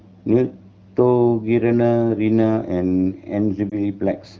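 At 3.70 to 3.77 s the speech briefly dips or warbles. This is a lost AMR speech frame. The gap fits a single 20 ms frame that failed its checksum after radio errors. The decoder filled it by reusing the last good pitch and vocal tract settings at reduced gain. The sound does not fade to silence. It wavers for a moment, then recovers weak or rough for a moment. The surrounding wideband speech is clear, which fits AMR-WB at about 12.65 kbit/s.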